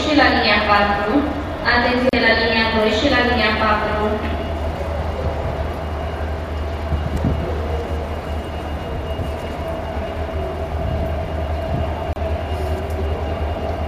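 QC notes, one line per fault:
2.09 s and 12.13 s, gap at a join of encoded pieces: continuous sound drops out for about 37 ms at 2.09–2.13 s and about 31 ms at 12.13–12.16 s, then resumes exactly where it stopped. The two gaps fall 10 s apart, which points to separately encoded segments butted together without trimming encoder start delay and last-frame padding. The codec smears the edges of the leftover silence, so the silent part is shorter than the gap.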